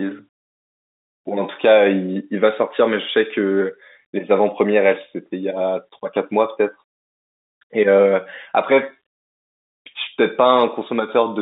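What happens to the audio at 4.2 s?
Nothing goes wrong at 4.2 s: the speech carries on intact through that moment, with only the narrow band of the G.711 telephone coding it passes through.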